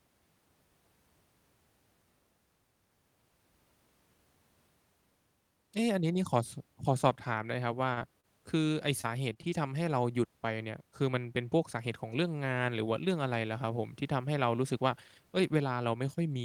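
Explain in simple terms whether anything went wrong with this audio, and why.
Three short stalls from late packets, at 7.93, 9.34 and 9.42 s, hold the sound on for about 18 to 33 ms until delayed data arrives, with nothing lost. Three short concealed packet losses, at 7.99, 8.20 and 9.01 s, each drop 20 ms of speech; the gap is filled by extending the preceding sound, heard as brief smears.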